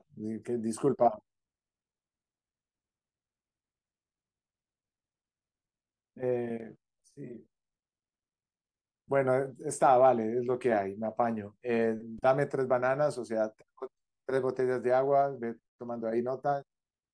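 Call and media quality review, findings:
Nothing stood out on listening to the speech in this recording.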